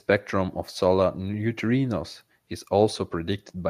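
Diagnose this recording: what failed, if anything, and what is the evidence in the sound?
No fault found in this recording.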